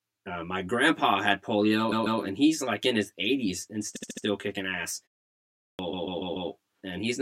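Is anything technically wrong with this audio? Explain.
Yes, three kinds of fault are audible in this speech clip.

Channel delay (comb filtering) runs throughout. One channel arrives roughly 10 ms late, and summing both to mono cancels shared content at evenly spaced frequencies, starting around 50 Hz. The result is a hollow, phasey tone with fixed spectral notches.

Repeated frames occur three times. At 1.91 to 2.20 s, a 144 ms block plays twice more, adding 288 ms. At 3.95 to 4.24 s, a 72 ms block repeats four extra times, also adding 288 ms. At 5.92 to 6.49 s, a 144 ms block plays four more times, adding 576 ms. Each time, compressed data was delivered more than once, so the decoder replays the same slice. This is heard as a stutter.

A clipped start after a pause occurs at 5.42 to 5.79 s. After a 0.43 s silence, the output device had to wake or relock, swallowing about 370 ms. The speech resumes abruptly, without its opening sounds.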